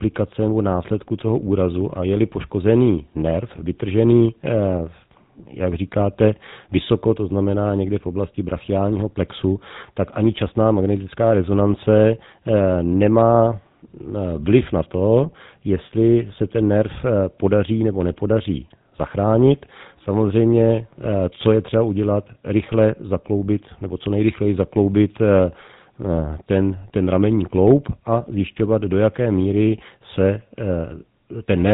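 GSM full-rate codec damage runs through the whole speech clip, from start to finish. The coder models the vocal tract as a filter and excites it with a regular pulse train that keeps only a sparse subset of excitation samples, so fine detail is thrown away. The result is a plainly audible buzzy, gravelly roughness on the voice, and nothing survives above 3.8 kHz, leaving a narrow, telephone-band sound that fits a 13 kbps coding rate.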